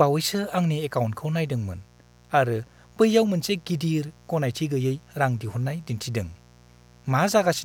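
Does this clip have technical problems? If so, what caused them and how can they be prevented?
Yes: a raspy mains buzz at 60 Hz runs throughout, about 30 dB below the speech. Switching spikes add harmonics into the kilohertz range, unlike a smooth, low hum. Use shielded cables and keep dimmers and rectifiers away from the recording chain.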